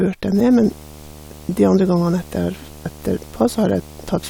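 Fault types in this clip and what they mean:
Video or display buzz: a screen or video cable is coupling its refresh signal into the audio path, so the picture's 75 Hz field rate gets into the sound. From 0.34 s to the end of the speech clip, this shows as a steady 75 Hz buzz with harsh hash above it, sitting roughly 20 dB below the speech and running straight through pauses as well as talking.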